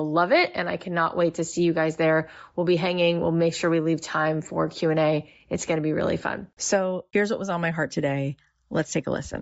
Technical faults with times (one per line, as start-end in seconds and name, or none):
0.00-9.41 Bluetooth LC3 compression